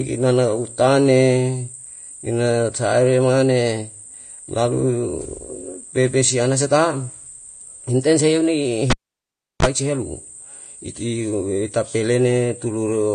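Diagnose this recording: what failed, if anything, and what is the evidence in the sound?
Codec stage: nothing above 9.8 kHz and plainly audible codec damage, likely AAC compression at a rate near 32 kbps. A plain low-pass filter would not add that damage.

Analogue wiring: a cable pulled and plugged in between 8.90 and 9.66 s. A pop, about 0.71 s of near silence, 35 ms of 50 Hz mains buzz, then a pop. The buzz rules out a digital dropout.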